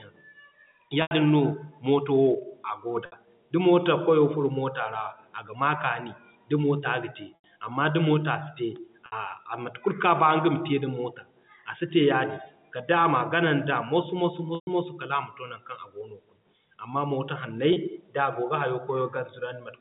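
Packet loss with pitch repetition occurs at 1.02 to 1.11 s, 3.06 to 3.12 s, 7.35 to 7.44 s, 9.06 to 9.12 s, 14.55 to 14.67 s and 17.73 to 17.76 s. Gaps of 30 to 120 ms, which fit 30 ms packets, are bridged by repeating the last pitch period. The shortest gaps sound like a briefly held, buzzy tone, while the 120 ms gap fades toward silence. All of this sits within the 150 Hz to 3.7 kHz band of G.711 A-law telephone audio.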